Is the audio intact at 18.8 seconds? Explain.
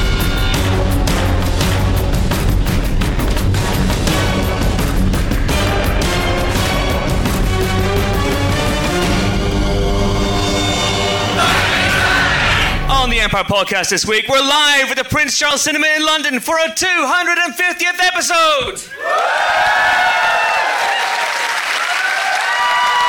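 Yes, the audio at 18.8 seconds is intact, with no dropout, glitch or other fault at that moment.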